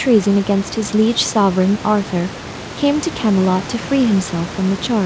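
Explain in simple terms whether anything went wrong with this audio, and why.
Nothing went wrong here: the speech sits well above a quiet room background that belongs to the recording itself, and it has passed through an ordinary internet call connection whose compression keeps the sound only up to about 8 kHz, which is normal for that kind of call rather than a fault.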